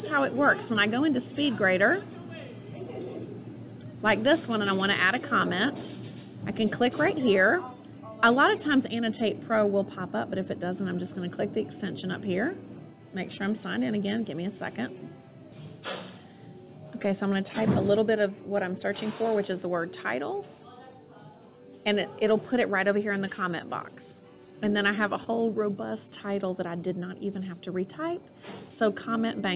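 At 25.24 to 25.28 s there is a short concealed packet loss. About 20 ms of audio arrived too late, and the receiver filled the gap by extending the preceding sound. It comes across as a brief smear or wobble over telephone-band audio that stops at 4 kHz.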